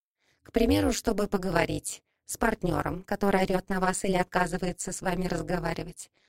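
The audio carries overlap-add ripple from start to finish: it was split into windowed frames and rejoined with an overlap that fails to sum to constant gain, so level dips by about 60 dB once per frame, giving a harsh, metallic buzz near 200 Hz.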